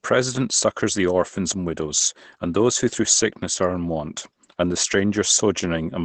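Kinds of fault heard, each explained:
Opus voice compression: The speech has been through a low-rate voice codec running in its linear-prediction mode, where the voice is modelled as a filter driven by a coarsely coded excitation signal. The sound points to a rate of about 12 kbps. The band is held to wideband, so nothing is carried above 8 kHz. Plainly audible throughout: a muffled, hoarse and faintly robotic quality on the voice.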